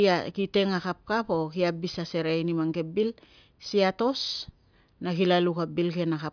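Nothing in the recording stood out as a technical problem on listening.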